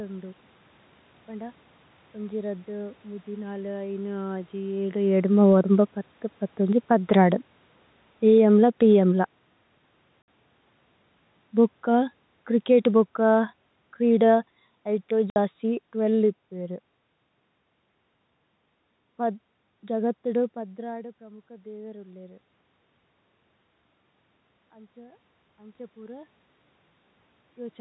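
From 5.27 to 8.89 s the automatic gain falls. The control found the input too loud, or its background noise too strong, and pulled its gain down by about 8 dB. The speech and its background sink together. At 10.22 s a 60 ms hole of packet loss filled with silence cuts the speech. It has hard edges, which fits three lost 20 ms packets. From 11.49 to 16.4 s the gain falls again, by about 7 dB. Within that stretch, at 15.3 s, a second 60 ms silent gap cuts in.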